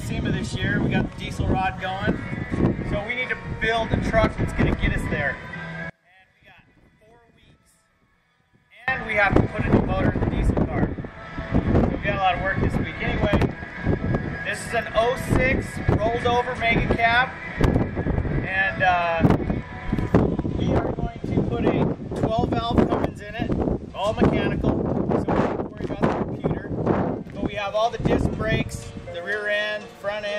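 From 5.90 to 8.88 s the sound drops about 31 dB, likely one channel inverted cancelling in mono; the waveform shrinks and the spectrogram dims across the band.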